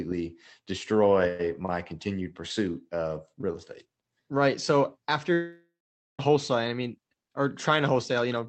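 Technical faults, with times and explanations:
5.33 to 6.21 s, long network dropout: the speech cuts out and a fading, buzzy continuation of the last sound covers the gap, trailing into about half a second of near-silence, then resumes with 0.86 s missing, likely from packets lost on the Opus call path.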